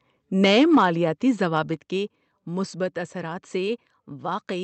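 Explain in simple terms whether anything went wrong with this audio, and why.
A couple of things went wrong. From 0.44 to 0.86 s the speech turns harsh and crackly on the loudest bits. That's microphone overload: the peaks hit the ceiling of what the input could take and got their tops sliced off, likely because the mic level was set too high.

Then there's a microphone volume stepped down problem. The level drops suddenly at 0.75 s, right in the middle of that distorted stretch, and again, more noticeably, at 1.74 s. The likely cause is the call software spotting the overload and turning the mic down in abrupt steps rather than smoothly.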